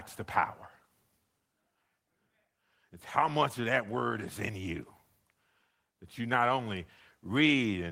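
Nothing technically wrong can be heard in the speech recording: the signal holds steady throughout, with no audible defect at any point.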